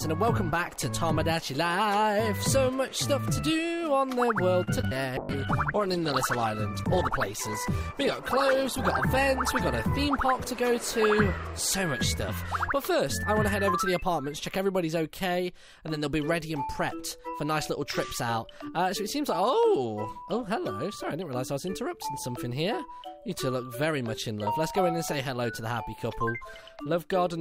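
At 4.63 to 4.69 s there is a short stall from a late packet. The jitter buffer ran dry, so the receiver held the last sound for about 38 ms until the packet arrived, then carried on from exactly where it left off. Nothing is lost. The sound is simply stretched, with a faint buzz or dip, and everything after it lands about 38 ms later. That added delay and intact continuity distinguish it from a dropout.

Two short concealed packet losses follow, at 4.81 to 4.85 s and 4.87 to 4.93 s. Here audio never reached the decoder: 20 ms in the first and 40 ms in the second. The receiver covered each hole by extending the preceding sound and blending back in, which gives a quick smear or wobble rather than a hold. Unlike the stall, real material is gone, so a brief sound can drop out of the sequence instead of arriving late.

From 5.19 to 13.62 s comes a call bitrate drop. The bandwidth estimate fell and the encoder was pushed from 96 kbps down to 13 kbps, staying at that floor for about 3.7 s. 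At such a low rate the coding turns coarse and the upper frequencies are trimmed, so the audio sounds rough, watery or muffled before recovering. Its long dulling of the upper spectrum sets it apart from the brief, localised glitches of packet loss.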